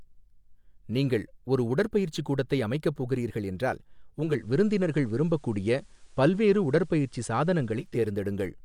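At 4.13 s the radio drops its digital stream and fades over about half a second to the FM analogue of the same station, staying there until 8.10 s. Digital radio blending to analogue brings faint hiss well under the speech and a level shift of about 2 dB.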